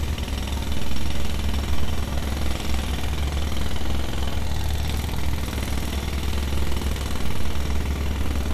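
A recording of everyday sounds with MP2 compression damage that's plainly audible the whole way through: a dull top with nothing above 15 kHz, plus a gurgling, granular grain as sub-bands flicker and get coarsely quantised. That likely comes from MPEG Layer II encoding at a low rate, which fits something around 80 kbps.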